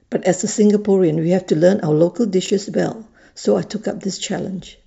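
At 2.46 to 2.50 s, chunks out of order: a 20 ms chunk arrived one chunk late and was played after its successor, so the speech briefly jumbles, with three hard joins, though nothing is missing.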